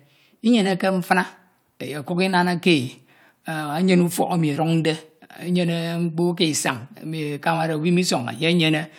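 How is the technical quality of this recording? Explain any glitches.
No glitches or technical faults can be heard anywhere in the speech recording.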